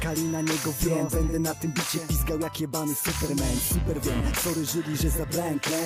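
From the start to 2.0 s a feedback whistle sits behind the sound. It is a thin, steady tone near 5.9 kHz, roughly 20 dB below the main signal, and it swells and fades slowly in level. The likely cause is a loudspeaker-to-microphone loop held just at the edge of feedback. One high frequency keeps ringing without running away. After 2.0 s the whistle is gone.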